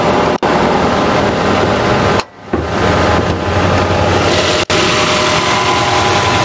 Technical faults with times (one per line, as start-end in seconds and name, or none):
0.00-6.45 gain pumping